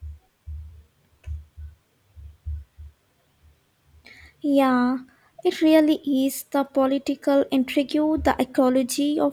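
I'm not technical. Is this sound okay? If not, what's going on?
Yes, this sound is okay. Nothing in the speech points to a technical problem.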